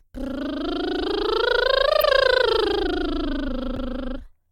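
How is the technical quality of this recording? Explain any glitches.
The music has two brief skips from compressed frames skipped, at 2.00–2.03 s and 3.76 s. Each time, about 20 ms of missing or rejected frames is jumped over.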